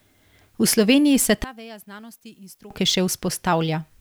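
A speech recording, with one fault. From 1.44 s to 2.71 s the sound collapses. The voice drops by about 24 dB and turns faint. The likely cause is one channel inverted. With one side's polarity flipped, anything shared by both channels cancels when they are mixed to mono. A centred voice is almost entirely shared, so little survives. What remains is the small difference between left and right.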